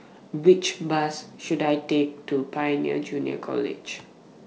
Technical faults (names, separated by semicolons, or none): none